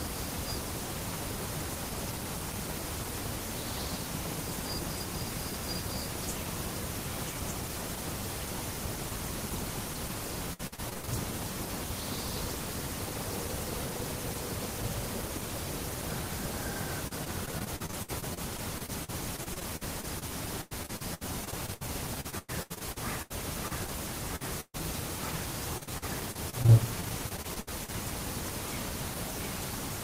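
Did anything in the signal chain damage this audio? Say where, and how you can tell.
Yes, at the network stage. There's repeated packet loss (robotic sound) at 10.53–11.09 s, 17.07–24.76 s and 25.78–27.90 s: choppy stretches where each missing chunk, up to 133 ms long, gets patched by stretching the last bit of sound before the next hole hits.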